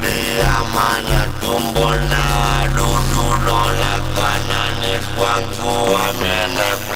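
Block size mismatch (padded) throughout: short blocks, consistent with 256 samples, are zero-filled to a longer read size, giving a 100 Hz buzz and playback at 0.533× speed.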